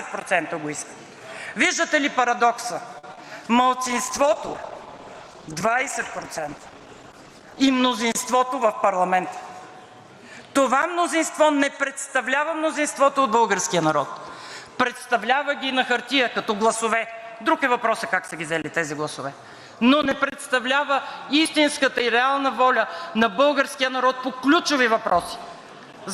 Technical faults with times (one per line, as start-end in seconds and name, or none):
2.98-3.26 repeated packet loss (robotic sound)
3.74-9.48 call bitrate drop
8.34-9.59 jitter buffer speed-up